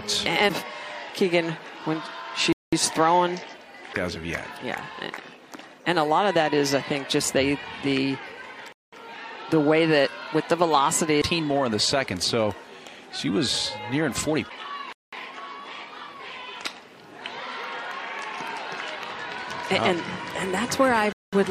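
Short, hard-edged holes of silence, each 200 ms long, cut into the sound at 2.53–2.73 s, 8.73–8.93 s, 14.93–15.13 s and 21.13–21.33 s. This is a gap between chunks: the audio arrives in 6 s chunks, and silence is inserted at each join without any sound being lost.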